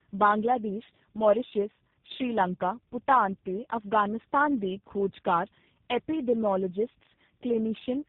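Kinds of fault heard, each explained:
tandem speech coding: The speech sounds rough, muffled and warbly throughout, with nothing above 3.8 kHz. The layered roughness fits three speech codecs in a row, likely GSM full rate, then CVSD, then G.729A, with plain G.711 links between them. At each link border the speech was decoded and coded again, so every coder had to model the previous coder's distortion as if it were speech. The artefacts stack instead of averaging out.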